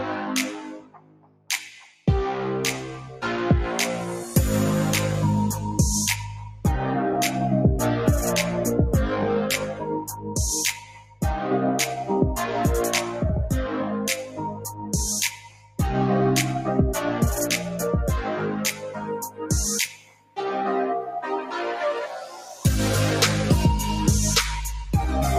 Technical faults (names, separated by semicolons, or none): noise suppressor applied to music or sounds; sound cut by the noise suppressor